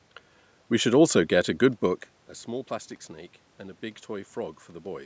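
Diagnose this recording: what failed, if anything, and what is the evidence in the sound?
Nothing in this speech recording points to a failure at any stage of the chain. The top end stops at 8 kHz and the lowest bass is trimmed, as the call's microphone processing would leave it, there is steady background noise from the room, and around two seconds in the level shifts as the talker moves relative to the microphone.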